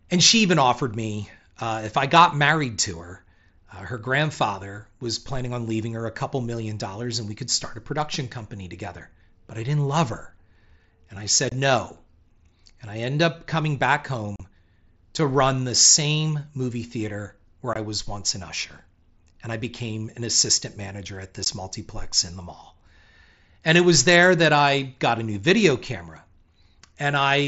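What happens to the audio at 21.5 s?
Unconcealed Bluetooth headset packet loss hits at 21.45 s, between "an assistant manager at" and "multiplex in the mall". About 15 ms of audio never arrived from the headset, a gap that fits two lost frames on the mSBC link, and nothing filled the hole, so silence or an idle pattern sits in its place. The result is a brief dropout with hard edges in the speech before the sound resumes.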